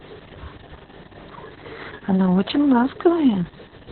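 From start to finish the speech carries heavy Opus voice compression: nothing comes through above 4.2 kHz, so it's narrowband and muffled, and the coarse SILK excitation makes it hoarse and slightly robotic, which fits a very low bitrate around 6 kbps.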